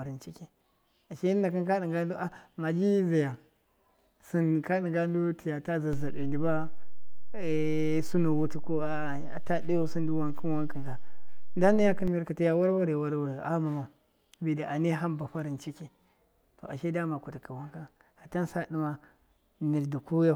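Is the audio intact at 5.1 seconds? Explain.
Yes, the speech at 5.1 seconds is intact, with no audible fault at that moment.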